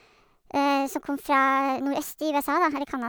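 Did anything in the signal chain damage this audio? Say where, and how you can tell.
Yes, at the playback end: it's a wrong sample rate fault running the whole length of the clip. The speech comes out hurried and chipmunky, about 1.38 times too fast and pitched up by about 5.5 semitones, with speed and pitch shifted by exactly the same ratio. That lockstep change means the samples were clocked out faster than they were captured, with no resampling in between, which fits 32 kHz material being played at 44.1 kHz.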